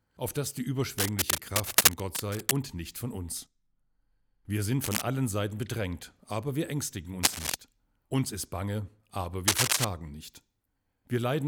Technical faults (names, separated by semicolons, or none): cable scratch noise